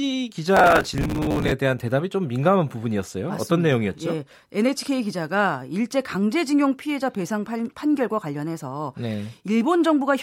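From 0.57 to 1.52 s the processor falls behind and misses dozens of buffer deadlines again and again. Each buffer lasts about 5 ms, and each miss repeats a scrap of old audio with hard edges. The result is processor overload crackle, a gritty tearing over the speech that stops once the load eases.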